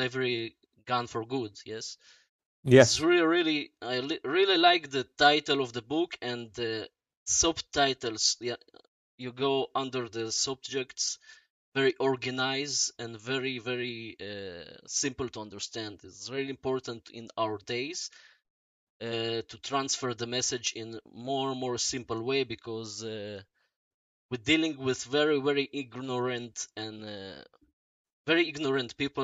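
Nothing in the audio stood out as a technical problem on listening.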